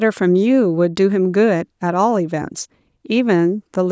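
No technical faults are present in the speech, which shows only the ordinary marks of call microphone processing: the lowest bass is trimmed away by its high-pass filter, and nothing reaches above 8 kHz.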